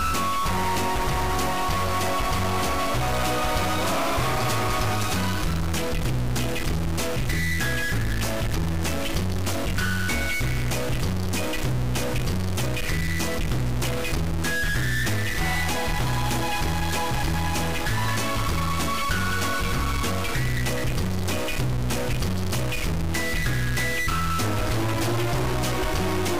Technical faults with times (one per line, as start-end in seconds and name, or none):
0.00-26.40 stuck bit